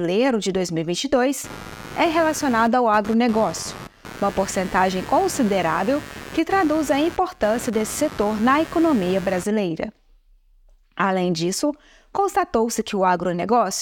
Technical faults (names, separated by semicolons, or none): computer activity noise